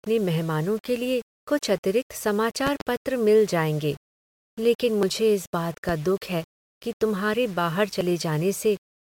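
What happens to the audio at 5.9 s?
Right after "इस बात", a single loud pop lands from 5.89 to 5.92 s, peaking roughly 10 dB above the speech. A sudden voltage step or pulse, likely from a plug, switch, static discharge or driver glitch, is added to the signal, and the following circuitry shapes it into a brief thump. Unlike a dropout or an edit glitch, nothing is removed: the speech continues unbroken beneath the pop, which simply sits on top for about 30 ms.

Under and around that pop, the speech is also coarse-grained, because it is carried on about 6 bits, likely rounded without dither. The rounding error tracks the signal, giving distortion roughly 25 dB below the speech that rises and falls with it. That separates it from steady hiss, which would stay constant through pauses. Here the grit clings to the speech and turns quiet tails gritty rather than leaving a smooth noise floor.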